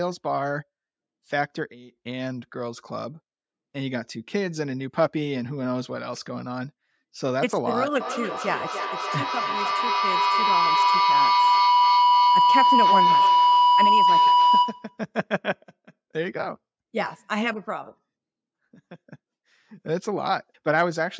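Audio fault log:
8.0–15.05 s, feedback howl: two devices in the room formed a microphone-to-loudspeaker loop that gained level on every pass, so instead of fading, the repeats, coming roughly every 0.3 s, narrow into a tone near 1 kHz, peaking about 7 dB above the speech.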